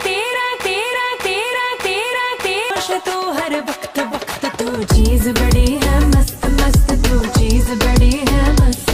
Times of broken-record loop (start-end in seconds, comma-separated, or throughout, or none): 0.60-2.70